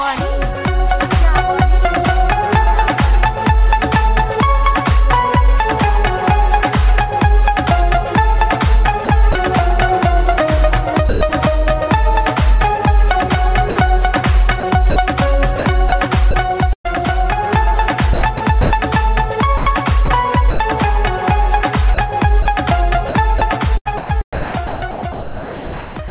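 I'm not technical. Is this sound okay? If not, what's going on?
No, there are gaps. The main one is sound chopped by the voice detector, at 9.05 to 9.35 s, 14.6 to 16.87 s, 18.13 to 18.70 s, 19.57 to 20.59 s, and 21.94 s to the end. The sound keeps cutting in and out, with bits swapped for a soft hiss. That's likely the sender's system switching its transmission on and off because it mistook quieter parts for background.

There's also sound dropped by the voice detector, two brief holes at 11.09 to 11.21 s and 13.70 to 13.76 s, where the sound simply vanishes into steady hiss for a moment. The likely cause is the same detector deciding nothing worth sending was there and pausing, and the receiving end filled the gap with fake background noise.

The call line itself is working as designed, though it cuts everything above 4 kHz, so the whole thing sounds a bit phone-like and dull.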